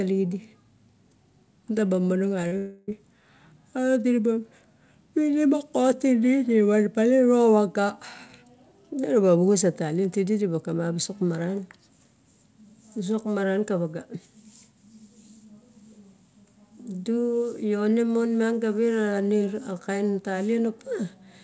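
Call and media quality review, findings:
Short concealed packet loss, 2.42–2.45 s: about 20 ms of packets reached the decoder too late. Jitter buffer's concealment extrapolated the preceding waveform for 14 ms, then crossfaded back. Audible as a brief smear on a band capped at 8 kHz, consistent with G.722.

Short concealed packet loss, 2.47–2.53 s: 40 ms missing and 41 ms synthesized from the last pitch cycle or shaped noise before rejoining real audio. Heard as a short wobble.

Long network dropout, 2.57–2.89 s: likely a network-side outage, with 300 ms of audio never delivered. Concealment covers the entire 300 ms as a decaying buzz or hiss. No silent gap follows. Audio resumes at 2.89 s with that stretch of content lost.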